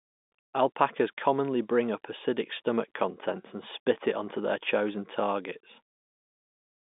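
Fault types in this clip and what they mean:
Nothing here counts as a fault: the speech simply carries the narrow telephone-line sound you'd expect from ordinary G.711 coding, with its top end stopping short of 4 kHz.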